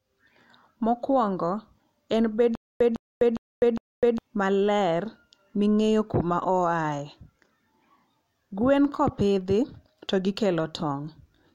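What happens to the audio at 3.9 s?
At 3.9 s you're in the middle of a stutter with silent gaps that runs from about 2.55 to 4.18 s. A snippet of speech about 155 ms long plays, then there's roughly 253 ms of dead digital silence, and this repeats four times on a steady 408 ms cycle. It's likely the stream stalled and kept replaying its last buffered fragment on each retry before running dry. Whatever speech belonged in that stretch is simply gone.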